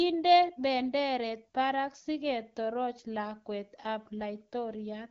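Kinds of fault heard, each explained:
No kinds of fault are heard in this speech, which comes through the AMR wideband (HD Voice) codec at 12.65 kbit/s.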